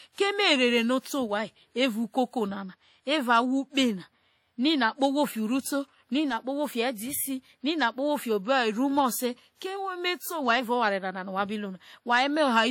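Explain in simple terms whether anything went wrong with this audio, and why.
Yes, something's off for the whole clip. The speech has a smeared, ringing quality, with a hiss that swells and fades along with the talking, and nothing at all comes through above 18.8 kHz. That points to WMA compression, likely squeezed fairly hard. This kind of encoder saves space by throwing away detail in chunks, which blurs sharp sounds into a washy haze you can hear from start to finish.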